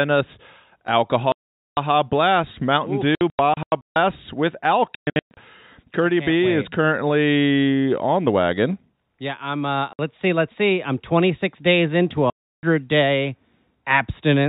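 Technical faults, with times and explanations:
1.32–1.77 s, 3.15–3.96 s, 4.95–5.37 s, 9.93–9.99 s and 12.30–12.63 s: packet loss filled with silence. The speech drops to silence with hard edges. The gaps come in steps of about 30 ms, which fits a 30 ms packet. The solid gaps last 450, 60 and 330 ms. At 3.15 s and 4.95 s the loss is scattered over 810 and 420 ms, with runs up to 150 ms. Nothing is repeated or faded in, so no concealment ran, and the speech around the holes keeps the narrow telephone band of the G.711 line.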